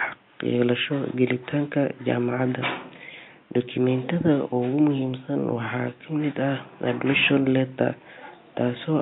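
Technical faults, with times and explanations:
Nothing stood out on listening to the speech, with only the room's own background noise sitting about 35 dB below it.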